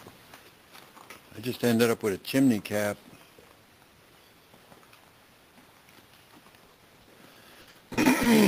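At 0.34 s there is a sudden gain jump: the level drops by about 4 dB in a single step and stays at that lower level to the end of the clip. The sound and its background noise fall together, with no fade between the two levels, so the change is abrupt. The likely cause is a digital gain setting or bit shift applied instantly rather than ramped in over a few milliseconds.

From 6.65 s to 8.27 s the audio breaks up with repeated packet loss, giving a robotic sound. Across this 1.6 s stretch, around a dozen short dropouts follow one another closely. Each is patched by extending the previous fragment of sound, and the patches add up to about 440 ms, roughly 27% of the span. The longest single gap is about 60 ms. The repeated stretching gives a choppy texture, with small pieces of the original sound missing.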